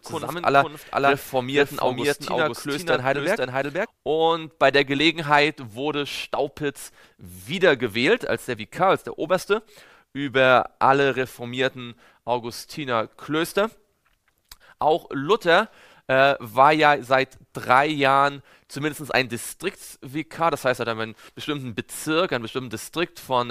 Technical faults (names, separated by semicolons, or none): doubled audio track